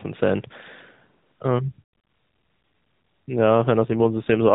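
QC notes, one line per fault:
3.81–4.54 s, AMR rate drop: The last stretch of speech turns rougher and more synthetic. The band stays narrow, capped at 4 kHz, with no gap. The coarser texture fits the network cutting the mobile codec from 12.2 to about 5.9 kbps.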